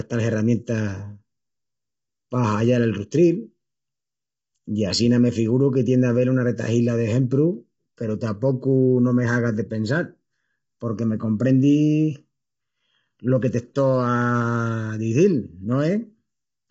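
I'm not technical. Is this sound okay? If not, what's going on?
No. Two problems run through the whole recording. The first is channel delay (comb filtering): one side arrives a fraction of a millisecond late, and when both sides are combined, certain pitches cancel, starting around 700 Hz, leaving the speech hollow and phasey.

The second is a rough, grainy texture, with hiss between the voice's tones and nothing above 7.8 kHz, so the top end sounds dull and slightly synthetic. This likely comes from low-delay AAC compression, the kind video calls use, squeezed too hard.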